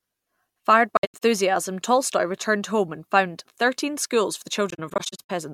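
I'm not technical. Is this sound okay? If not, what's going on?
No. The speech has two brief gaps caused by AAC frame loss with muting. Between 0.97 and 1.23 s, and again between 4.70 and 5.30 s, short pieces of the compressed audio went missing, and the decoder filled each one with silence. The sound fades out and back in around every gap, so the dropouts sound soft-edged. The longest single hole is about a tenth of a second, and the later stretch is broken up more.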